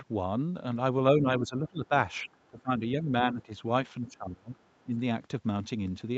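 An echo canceller, likely confused by both sides talking at once, pulls the speech down by about 15 dB from 1.12 to 1.93 s, so the talker dips. The same speech suppressed in double talk returns from 2.24 to 3.13 s. Inside that stretch, from 2.27 to 2.62 s, the other side's voice leaks through as a faint scrap about 35 dB below the speech, likely loudspeaker echo the canceller failed to remove. Further suppression dips follow from 3.32 to 3.51 s, from 4.06 to 4.57 s (the deepest, at about 25 dB) and from 4.84 to 4.96 s. Throughout, the call path's band stops at 8 kHz.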